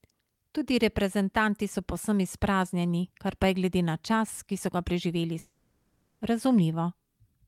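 At 5.39 s, right after "ki so ga preživeli", the speech gives way to a smeared buzzy continuation of the last sound lasting until 6.23 s, likely a long network dropout. About 0.82 s of speech is missing and entirely replaced by concealment, with no silence. Unlike a brief packet-loss glitch, the gap runs far longer, and the speech resumes later without the lost stretch.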